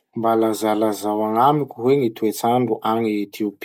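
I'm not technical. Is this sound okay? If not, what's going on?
Yes, nothing in this recording points to a technical problem with how the sound was captured or handled.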